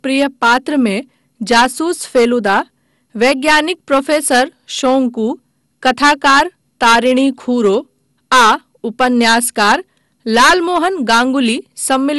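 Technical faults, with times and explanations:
Throughout: hard clipping. Some stage in the chain was driven about 11 dB past what it could pass, so the tops of the speech waveform are cut flat, affecting around one sample in twenty. Those squared-off peaks add harmonics high in the spectrum that were never in the voice, heard as a crackling, gritty edge on the louder syllables and a harsh fuzz whenever the speech pushes hardest.
Throughout: generation loss. The sound points to audio that was likely decoded and re-encoded around five times through an MP2 codec at roughly 96 kbit/s. Each pass requantises on a shifted frame grid, so noise piles up. Nothing survives above about 11.9 kHz, and the speech comes across swirly, hollow and smeared, with consonant attacks blurred beyond what a single encode at that rate would cause.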